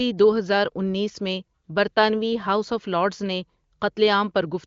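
No faults: the speech carries the band-limited sound of a wideband HD Voice (AMR-WB) codec, with nothing above about 7.4 kHz, and the clarity points to one of its higher bitrates, with at most faint coding artefacts.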